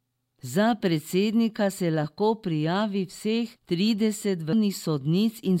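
A brief digital blip cuts into the speech at 4.53 s. This is damaged data in a compressed stream: corrupted bytes made the decoder misread the frame and lose sync before recovering at the next frame header.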